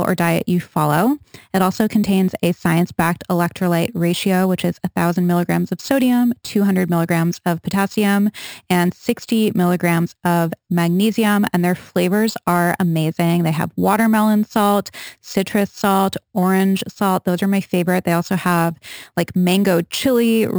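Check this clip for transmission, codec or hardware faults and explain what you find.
One fault runs through the whole clip: imaging from sample-and-hold upsampling. Each sample was repeated without smoothing, which fits a 12 kHz original. Mirrored speech spectrum fills 6 kHz to 12 kHz, about 20 dB down, as metallic fizz.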